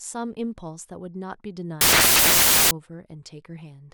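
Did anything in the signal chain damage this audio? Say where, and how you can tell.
Yes, at sample-format conversion: from 1.81 to 2.71 s the speech turns into loud, harsh broadband noise, samples built from the wrong bytes, with low bits misread as high.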